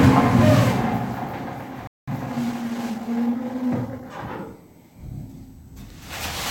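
At 1.87 s the sound cuts out completely in mid-flow. This is a playback stall. The silence lasts about 0.2 s, until 2.08 s. The player most likely ran short of data or was briefly blocked.

From 2.08 s to 4.1 s comes a time-compressed catch-up. The player trims its backlog by cutting out short pieces and cross-fading across the gaps. The sound runs about 1.1 times fast. Its pitch stays normal.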